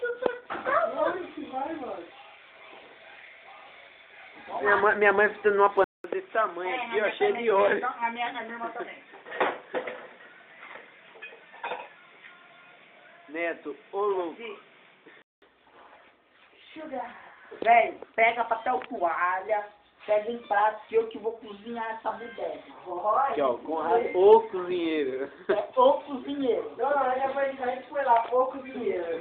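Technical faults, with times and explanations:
5.84 to 15.42 s, input switched to a poorer device: after a short gap of about 200 ms, the sound drops to roughly 10 dB quieter and turns dull and boxy, with nothing above 3.8 kHz and a new background noise sitting roughly 30 dB under the signal. At 15.42 s the fuller sound comes back. The likely cause is the system swapping to another microphone or a headset's call profile, whose narrower band, lower level and own noise floor you hear for that stretch.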